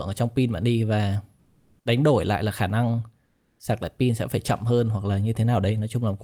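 Comfort noise in place of the background at 1.39–1.75 s, after "pin bạn đi và", and 3.25–3.55 s, before "sạc lại pin sẽ". Both gaps carry steady, featureless hiss, likely from Opus discontinuous transmission. The first is about 6 dB louder than the real background; the second roughly matches it.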